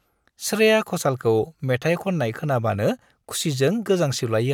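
No technical faults can be heard anywhere in this speech recording.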